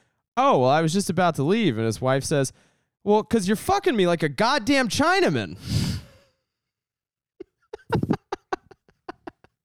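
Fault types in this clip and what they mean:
No faults can be heard anywhere in the recording.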